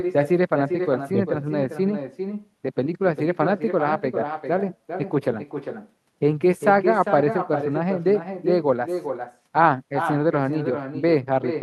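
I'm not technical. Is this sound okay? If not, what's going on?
No. All the way through, every bit of speech is followed a little under half a second later by a fainter, thinner copy of itself, like a shadow trailing each phrase. This is echo with no canceller: on the other end, the call is playing through a loudspeaker, their microphone picks it up, and nothing strips it out, so the talker's own voice travels back across the network and arrives late.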